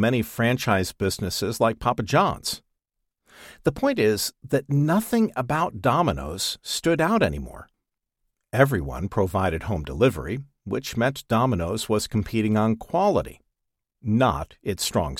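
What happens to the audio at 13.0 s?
Nothing goes wrong at 13.0 s; the audio runs through that moment intact, with no dropout, click or other fault to be heard.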